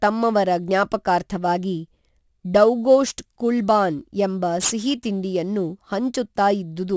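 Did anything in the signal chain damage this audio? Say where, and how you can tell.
Yes. Throughout the speech, sibilants sound gritty and metallic, with the spectrum crowding hard against 8 kHz. That is aliasing at the sample-format conversion stage, consistent with a drop to a 16 kHz rate without an anti-alias filter, so upper frequencies folded back as fairly strong false tones.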